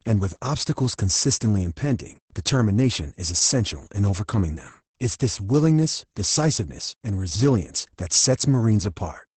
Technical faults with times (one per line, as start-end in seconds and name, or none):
0.00-9.37 Opus voice compression